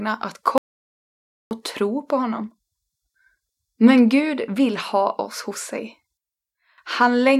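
A speech clip with an audio dropout to silence from 0.58 to 1.51 s: about 0.93 s vanishes into silence before "tro på" resumes abruptly. Unlike a natural pause or noise gate, no room tone survives, which likely points to a lost input or mute.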